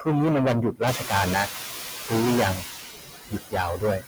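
Hard clipping runs through the whole recording. The level is driven roughly 19 dB past what the chain can pass, so nearly a third of the waveform is flattened at that limit. That is heavy overload, not an occasional peak crackle. Every loud syllable carries a harsh, buzzy fuzz, because the squared-off tops add strong high harmonics. Because the distortion follows loudness rather than time, it is set apart from dropouts or codec noise.

Noise suppressor artifacts are also present throughout. The suppressor works band by band on each short frame. The background dips in the gaps and swells back under the speech. Steady hiss from a poor microphone would stay constant, but this noise keeps pumping with the speech.

Speech cut by the noise suppressor first appears from 0.72 to 0.81 s, with a drop of about 19 dB. A brief stretch of speech goes faint, as if swallowed, because the suppressor mistook it for background. 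It recurs from 0.98 to 1.11 s (about 12 dB), 1.46 to 2.12 s (about 17 dB), and 2.56 to 3.55 s (about 20 dB). The last stretch covers around a second of speech. These are gaps in the speech level itself, not in the noise, which separates them from simple packet dropouts.

Noise suppressor catching up begins at 0.87 s. Around 1 s the room noise jumps by about 17 dB, ending up roughly 9 dB below the speech. The suppressor's noise estimate lags, so the new noise comes through with little reduction at first. Over about 620 ms, until 1.49 s, it settles down by about 6 dB. This gradual fade after a step in noise is the adaptation lag, not a level ride on the whole signal.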